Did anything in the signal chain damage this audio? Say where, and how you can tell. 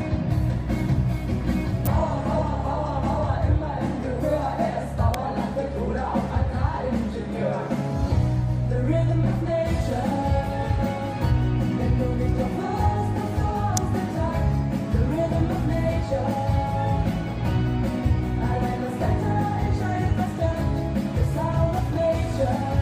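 Yes. The analogue wiring likely picked up arcing from a nearby switch or motor, so sharp snaps, each an electrical switching spike reaching about -10 dBFS, sit on top of the audio at 1.86, 5.14 and 13.77 seconds. Each lasts only milliseconds.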